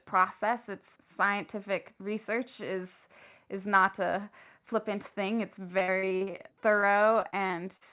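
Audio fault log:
5.68–7.83 s, repeated packet loss (robotic sound): Just after "a flippant thing it's", the speech breaks up into about twenty short holes across this stretch. The longest lasts about 51 ms. Each hole is filled by stretching the last bit of sound. Roughly a fifth of the span is patched this way, and some pieces are lost outright. The call path's narrow band, nothing above 4 kHz, fits G.711 at 64 kbps.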